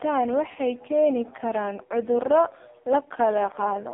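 Speech run through the AMR narrowband mobile codec throughout, sounding buzzy and synthetic, which points to a very low rate mode near 5 kbps. A spectrogram shows nothing above 3.8 kHz, with the line band spanning 200 Hz to 3.6 kHz.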